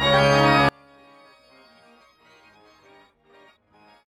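From 0.69 s to the end, the summed sound drops by about 36 dB to a faint residue. The likely cause is one channel inverted, so the shared content cancels in mono. A waveform shows amplitude collapsing there, and a spectrogram shows energy vanishing across the band.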